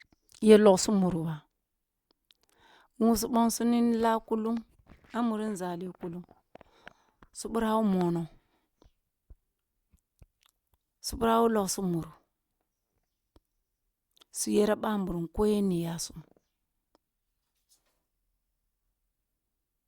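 Nothing in this speech recording stood out as a technical fault on listening.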